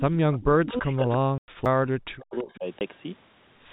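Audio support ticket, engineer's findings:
Faint delayed copy of the speech at 0.33–0.44 s, 0.87–1.14 s and 2.39–2.58 s. It trails the original by 334 ms, at about 20 dB down, then about 30 dB in the last stretch. Echo leak, likely from the far end's echo canceller passing back loudspeaker pickup.

Near-side speech pumps down and drops out in pieces from 0.64 to 2.65 s, roughly 2 s affected, with the deepest dips around 40 dB. Speech suppressed in double talk, likely the canceller mistaking the talker for echo while both sides overlap.

Hard-edged holes at 1.38–1.48 s (100 ms) and 2.79–2.81 s (20 ms). Packet loss filled with silence: the receiver inserts silence for missing packets. Gap sizes fit a 20 ms packet length.

Tick with a sudden jump in the audio at 1.65 s, with a very brief mute of a few milliseconds. CD skip: the laser jumped to a different track turn, and playback resumed from another point on the disc.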